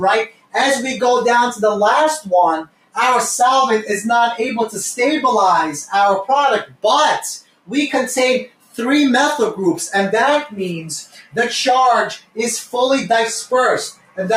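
A noise suppressor made for speech has been left running on the sound, and it treats steady content as noise, so the level swings by around 10 dB while attacks pass and sustained parts and tails sag. On a waveform the envelope pumps, and on a spectrogram the held energy thins between onsets. Sound is cut by the noise suppressor at 0.26–0.54, 2.65–2.96, 6.65–6.84, 7.41–7.69, 8.47–8.78, 11.04–11.34, 12.18–12.37 and 13.91–14.18 s. Each dip lasts a fifth to a third of a second and drops about 15 to 18 dB, visible as sudden notches in the waveform and dark gaps across the spectrogram.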